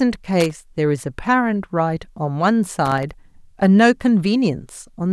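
Right near the start of this speech clip, from 0.40 to 0.53 s, there's a short, ragged burst of loose connector crackle, and it comes back for a bit longer between 2.85 and 3.11 s. What's happening is a worn or dirty contact somewhere in the chain flickering between connected and not, so the signal gets chopped up and you hear irregular scratchy crackle.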